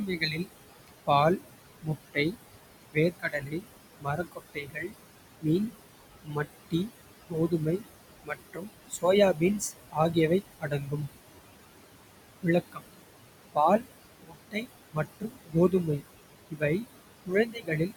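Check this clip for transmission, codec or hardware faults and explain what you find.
Two faults come from the noise suppression stage: processing artifacts that run through the whole clip, and repeated cutting of the speech itself. The room noise sits about 11 dB below the speech and is part of the recording, not a fault.

Noise suppressor artifacts are present from start to finish. Between phrases the background drops away sharply, by about 20 dB, then swells back up underneath the speech, so the noise floor pumps in step with the talker. The suppressor judges each frame and frequency band separately, treating anything that looks like steady hiss as noise and pulling it down.

Speech cut by the noise suppressor happens in five stretches: 0.06 to 2.36 s, 2.92 to 5.46 s, 6.24 to 10.94 s, 12.42 to 12.86 s, and 13.54 to 17.92 s. In each, parts of the speech go faint or seem swallowed, dipping by about 18 to 22 dB at worst. 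The affected portions add up to roughly half a second in the first stretch, around a second each in the second, third and fifth, and a brief moment in the fourth. The suppressor mistook soft, low-level speech energy for background noise and turned it down along with the room sound.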